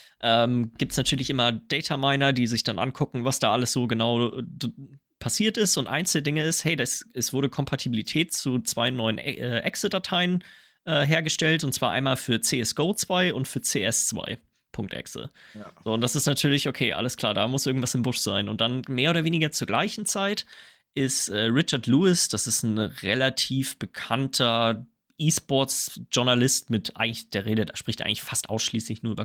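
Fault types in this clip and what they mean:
Nothing stood out on listening to this recording.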